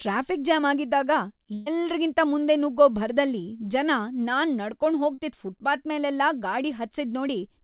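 At 1.54 to 1.68 s comes a burst of packet loss: about 120 ms of speech never arrived, and the receiver stretched the last sound into a held, fading continuation with no silence. Unlike a brief concealment, a whole stretch goes missing before speech resumes.

At 5.14 to 5.20 s a short concealed packet loss patches roughly 36 ms with a continuation of the preceding sound, heard as a quick smear rather than a sustained buzz. It is set against band-limited audio with nothing above 4 kHz, which fits a G.711 call codec.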